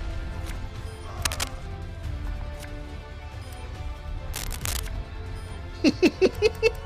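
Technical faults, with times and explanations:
1.25–1.49 s and 4.34–4.80 s, cable scratch noise: two short patches of dense, ragged scratching sit over the audio, the first roughly as loud as the sound itself and the second somewhat quieter. This likely comes from a worn cable or connector being moved, its contact resistance jumping about and injecting noise. Unlike isolated clicks or regular digital crackle, the bursts are irregular and clustered, rising and fading with the movement rather than recurring at a fixed rate.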